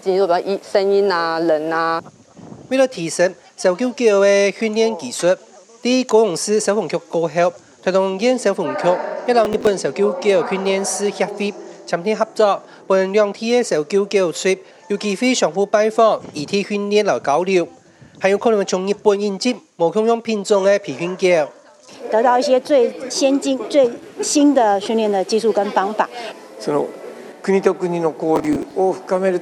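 Processor overload crackle twice, at 9.45–9.67 s and 28.36–28.74 s. The processor misses a run of roughly 10 ms buffer deadlines, replaying stale audio as gritty, tearing crackle that stops when the load eases.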